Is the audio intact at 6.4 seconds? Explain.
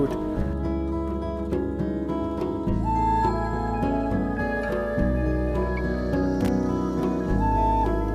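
No. From 6.41 to 6.48 s there is a brief, irregular burst of crackle and scratching, the sound of loose connector crackle. A worn or dirty contact is rapidly making and breaking, chopping the signal for about 76 ms.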